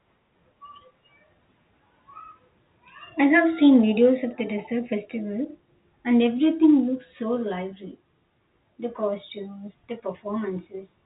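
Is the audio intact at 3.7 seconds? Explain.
Yes, the audio is intact at 3.7 seconds; what is heard there is simply the normal narrow band of G.711 telephone coding, with nothing passing above about 3.8 kHz.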